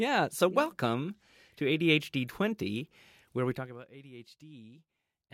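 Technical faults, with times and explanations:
3.50 to 3.84 s, zipper noise: the speech level falls by about 20 dB in 1 dB jumps, roughly 50 a second, with no smoothing between them. Each jump clicks, so the fade buzzes. The waveform envelope looks like a staircase, and the spectrogram shows faint, evenly spaced vertical lines.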